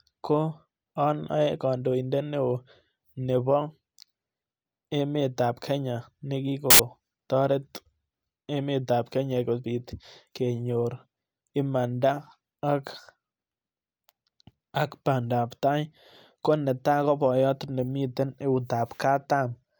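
Samples built from the wrong bytes appear from 6.70 to 6.79 s, a burst of about 90 ms in this speech clip. For that stretch the reader assembles each sample from misaligned or swapped bytes, so the rapidly fluctuating low-order bits end up as the most significant part of every value. The result is a sudden burst of loud, harsh broadband noise.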